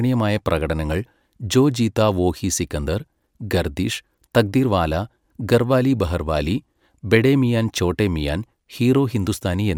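No technical faults are audible.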